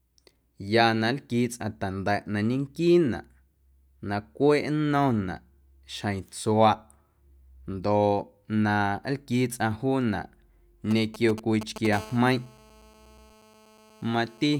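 From 10.91 to 11.87 s, GSM signalling bursts break into the speech. A nearby 2G phone is sending brief groups of radio pulses, and the audio circuitry rectifies them. The result is a galloping run of ticks and short 217 Hz buzzes, roughly 10 dB below the speech.

At 11.93 s the GSM phone buzz begins and lasts until 14.55 s. The phone is now transmitting continuously, as in a call, pulsing 217 times a second. The rectified pulses give a steady, raspy buzz full of harmonics, about 23 dB below the speech.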